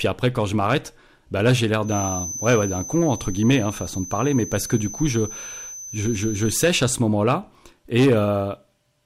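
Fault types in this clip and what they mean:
Feedback whistle: The loudspeaker-to-microphone loop is likely sitting right at the edge of feedback, with enough gain for one frequency to keep recirculating but not enough for it to grow into a howl. In this speech clip that shows as a thin, steady whistle at about 6.1 kHz from 1.81 s to 6.76 s, riding about 15 dB below the speech and swelling and fading slowly in level.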